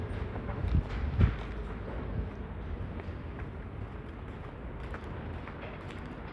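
No technical faults can be heard anywhere in the audio, and the signal holds steady and intact for its whole duration.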